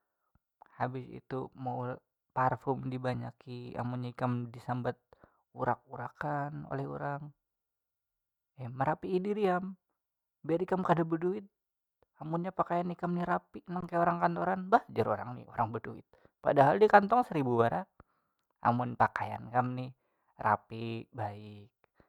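At 13.81 to 13.83 s, an underrun with held sample: the output buffer emptied, freezing the waveform for 20 ms, then speech resumed where it paused, nothing lost, with only a soft edge.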